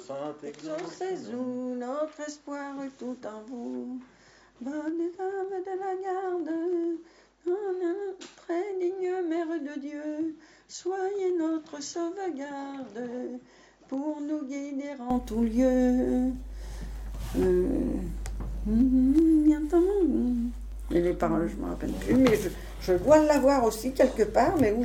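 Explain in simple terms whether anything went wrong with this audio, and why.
From the start until 15.1 s, the audio sounds dull, quieter and slightly hissy, with nothing above 7.4 kHz. At 15.1 s it clears up abruptly, with no gap. This points to an input switched to a poorer device, likely a lower-quality microphone.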